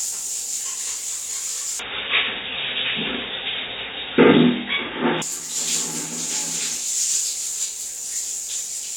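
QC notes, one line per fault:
1.79–5.22 s, input switched to a poorer device: the band abruptly narrows, with nothing above 3.8 kHz, giving a dull, boxy tone, a modest level shift and a faint new noise floor. There is no gap at either switch; the cause is likely a change to a narrower-band input device.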